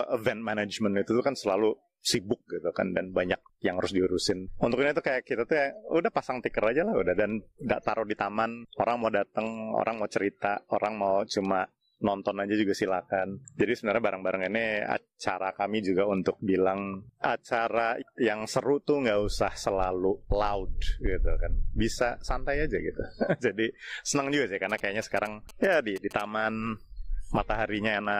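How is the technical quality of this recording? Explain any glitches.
One glitch mars the recording: GSM signalling bursts from 24.70 to 26.22 s. A nearby 2G phone exchanging signalling radio bursts was rectified by the audio circuitry, producing a galloping dit-dit-dit of short 217 Hz buzzes roughly 20 dB below the sound.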